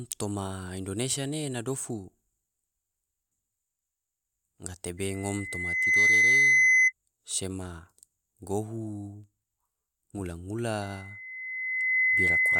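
Loudspeaker feedback squeal hits this speech clip twice, from 4.97 to 6.93 s and from 10.82 s to the end, each a 2 kHz tone swelling over about a second to well above the speech: the microphone is hearing its own loudspeaker, and loop gain exceeds one there.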